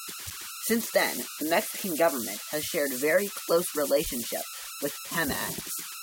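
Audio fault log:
throughout: converter idle tones. An undithered delta-sigma converter settles into repeating bit patterns at low input levels, producing a whistle near 1.5 kHz in the pauses between speech and grainy noise under quiet passages, with the error sitting about 9 dB below the signal.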